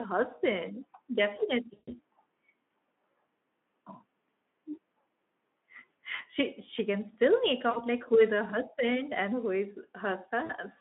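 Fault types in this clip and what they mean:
VoIP packet loss concealed by the speech codec: The decoder extrapolated the voice over lost packets. Four gaps of 40 to 140 ms turn into a buzzy tone or coloured noise that fades, then recover slowly.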